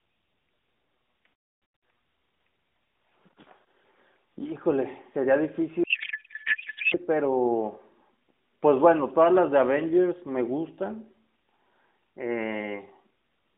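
A codec payload misread, with the sender packing AMR frames octet-aligned while the receiver parses them as bandwidth-efficient, hits this narrowband speech recording from 5.84 to 6.98 s. Every field lands in the wrong bits, so the decoder produces garbled, warbling noise that barely tracks the talker, then recovers once framing agrees again. Outside that stretch the AMR-NB coding sounds consistent with a 12.2 kbps mode, lightly coloured and confined to about 200 Hz to 3.6 kHz.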